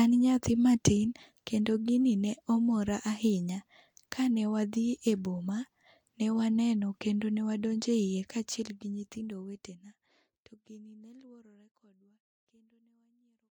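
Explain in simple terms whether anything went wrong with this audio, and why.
Nothing went wrong; the speech just fades out gently.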